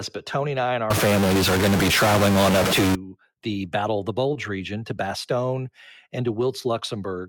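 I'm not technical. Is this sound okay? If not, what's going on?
No. A stuck bit runs from 0.90 to 2.95 s, just after "and I and our". The speech turns rough and noisy, and the pauses fill with hiss. The likely cause is a broken wire or converter that locks one piece of each sample's number at a fixed value.

A short concealed packet loss follows at 4.33 to 4.37 s, between "of the" and "region to". A sliver of audio arrived too late, so the receiver filled the gap by extending the previous sound, leaving a brief smear.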